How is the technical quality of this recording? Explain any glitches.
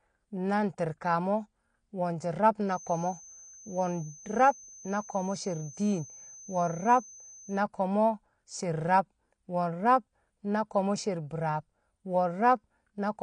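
The technical quality is poor, with plainly audible codec damage throughout and a whistle for part of the speech.

AAC compression affects the whole clip. Nothing reaches above 9.8 kHz, and sibilants sound smeared and fizzy. This is likely an AAC-LC encode at a low bitrate, around 32 kbps, which drops high bands and coarsely quantises the rest. Unlike a plain low-pass filter, it also warbles.

A feedback whistle runs from 2.65 to 7.65 s: a thin, steady tone at 6.2 kHz, roughly 20 dB below the speech, swelling and fading slowly in level. The likely cause is a speaker-to-microphone loop held just short of runaway. Unlike mains hum, it is a single high pitch.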